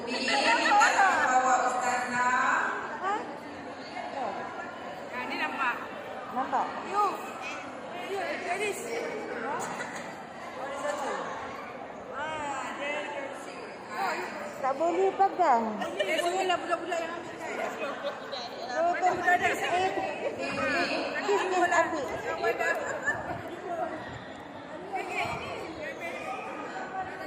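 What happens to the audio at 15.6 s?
Nothing goes wrong at 15.6 s; the audio runs through that moment intact, with no dropout, click, distortion or other fault.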